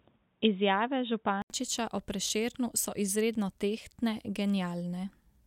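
From 0.0 to 1.5 s the speech is dull and boxy, with nothing above 3.8 kHz. An input switched to a poorer device is the likely cause. An 80 ms gap follows before full clarity returns.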